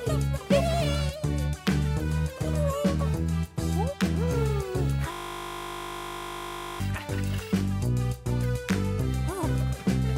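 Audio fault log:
5.12–6.80 s, system hang loop: a steady 50 Hz buzz as one 20 ms slice repeats, the hardware cycling its buffer while the system froze.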